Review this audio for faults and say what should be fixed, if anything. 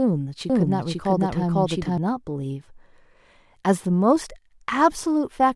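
From 0.50 to 1.98 s the speech is heard twice: a second, equally loud copy trails about half a second behind, with no fade or room colour, and cuts in and out abruptly. This doubled audio track is likely from a slower duplicate capture path or misaligned edit copy. Route each source only once and check edits for overlapping duplicate regions.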